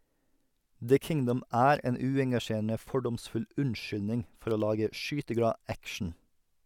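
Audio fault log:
No fault is heard anywhere in this speech recording. There is nothing to log against any time in it.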